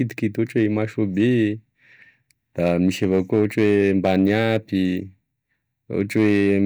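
Hard clipping hits the speech at 0.57 to 0.66 s, 2.63 to 4.57 s and 6.01 to 6.58 s. Peaks overdriven by about 1, 4 and 3 dB are cut flat, adding crackle and harsh fuzz.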